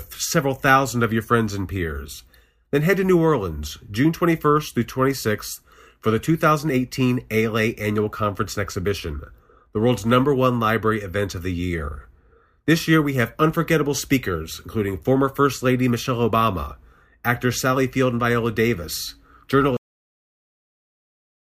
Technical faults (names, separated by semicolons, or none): cut-off end